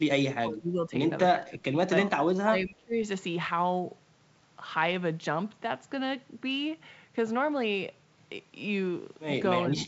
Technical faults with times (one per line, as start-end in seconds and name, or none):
0.38-0.94 speech suppressed in double talk
1.32-2.96 speech suppressed in double talk
9.65-9.79 speech suppressed in double talk